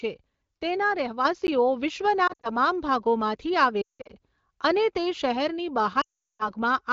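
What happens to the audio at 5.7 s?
At 5.7 s the speech is still sitting about 5 dB higher than it was before 1.25 s, because a sudden gain jump at 1.25 s raised the level and it stays raised to the end of the clip. The step likely comes from a digital gain setting applied in a single sample with no ramp, so the speech and its background noise move up together rather than the speech alone getting louder.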